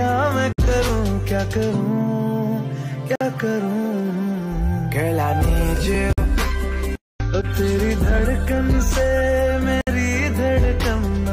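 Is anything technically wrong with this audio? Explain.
Yes, there are two kinds of fault.

Four short holes open in the continuous sound at 0.52, 3.16, 6.13 and 9.81 s, each about 51 to 60 ms, with smeared edges before the sound resumes. This is a gap at a join of encoded pieces: separately encoded segments were spliced without trimming encoder delay and end padding.

At 0.89 s and 5.95 s there is a tick from a block of digital silence about 1.45 ms long, which fits a 64-sample buffer. The output abruptly drops to silence and returns, likely because the buffer was not filled in time.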